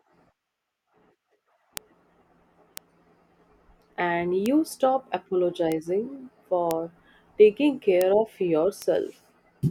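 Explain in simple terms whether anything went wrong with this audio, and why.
Seven bit error spikes are heard as single sharp ticks at 1.77, 2.77, 4.46, 5.72, 6.71, 8.01 and 8.82 seconds. Each is one or two corrupted digital values that jump and instantly return. Unlike a dropout, no sound goes missing, and the ticks have nothing to do with the speech.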